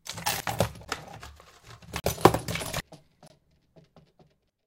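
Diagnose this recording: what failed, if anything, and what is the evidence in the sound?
Three short glitches, at 0.40 to 0.43 s, 2.80 to 2.83 s and 4.50 to 4.53 s, each about 30 ms long, show damaged data in a compressed stream. The failure is at the codec and storage or transport stage. Corrupted bytes made the decoder misread a frame there. It lost sync and jumped to the next valid frame header, so a burst of garbled output replaced the sound.

Three hard-edged holes, each cutting in and out with no fade, show a block of digital silence. The first is a tick at 0.85 s lasting about 12 ms. The second is a 40 ms gap at 2.00 to 2.04 s, and the third a 24 ms gap at 3.28 to 3.30 s. The fault lies in the driver or buffer stage. Samples were replaced by zeros, most likely because the output buffer was not filled in time.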